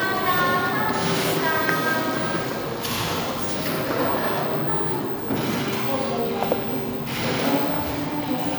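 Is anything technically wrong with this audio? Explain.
No, nothing technically wrong can be heard in this audio. There is no fault here that needs explaining.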